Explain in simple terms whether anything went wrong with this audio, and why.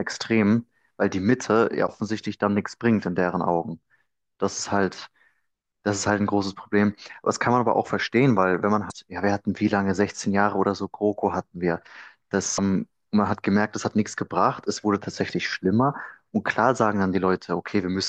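Three short glitches interrupt the speech, at 1.84–1.88 s, 8.87–8.92 s and 12.54–12.59 s. Each is a brief chirp, squawk, click or short hole. They come from damaged data in a compressed stream. Bad bytes confused the decoder, and it lost its place until it found a clean frame.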